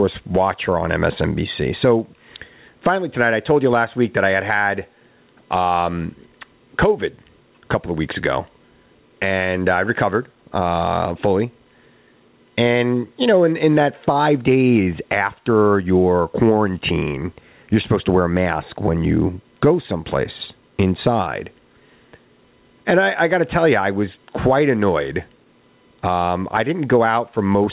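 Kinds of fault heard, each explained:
Gain pumping: The gain swings by roughly 15 dB. The likely cause is gain set too high, with a fast limiter clamping loud moments. Loud and soft parts sit close, so the speech sounds squashed.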